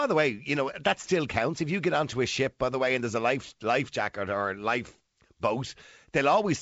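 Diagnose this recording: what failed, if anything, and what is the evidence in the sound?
Nothing in the recording points to a failed stage anywhere in the chain. The speech carries wideband telephone coding, with content reaching about 7.7 kHz and nothing above it, which fits G.722 running at its full 64 kbit/s rate.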